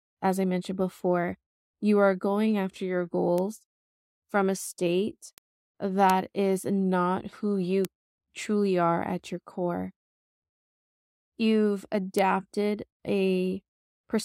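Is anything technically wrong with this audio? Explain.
Yes. The speech carries five bit error spikes, at 3.38 s, 5.38 s (just after "from a state"), 6.10 s (just before "is not who you"), 7.85 s (between "is not who you" and "truly are at your") and 12.19 s. Each is a single flipped bit that throws one sample, two at 6.10 s, to a wrong value that jumps by a power of two and snaps straight back, peaking at about −18 to −6 dBFS. Each is heard as a lone, bright, full-band tick. Unlike clipping or a splice click, the ticks ignore the speech's level and waveform and leave no gap.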